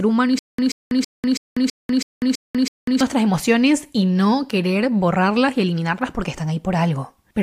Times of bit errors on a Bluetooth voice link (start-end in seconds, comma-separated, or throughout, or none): none